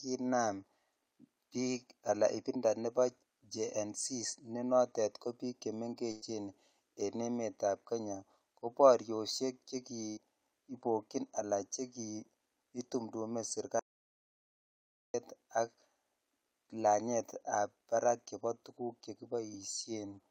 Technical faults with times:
6.11-6.23 burst of packet loss
10.09-10.19 burst of packet loss
13.79-15.14 audio dropout to silence

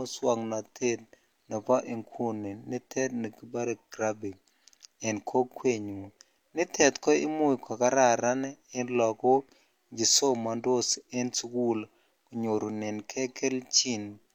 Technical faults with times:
none

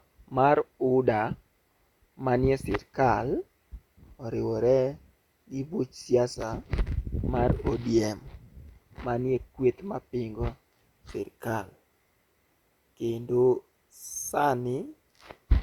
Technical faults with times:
none

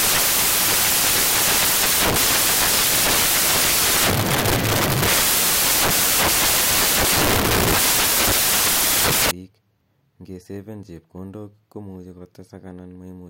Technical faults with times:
0.00-9.31 samples built from the wrong bytes

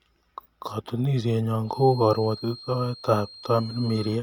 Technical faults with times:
1.59-4.22 feedback whistle

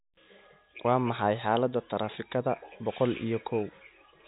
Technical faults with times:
none

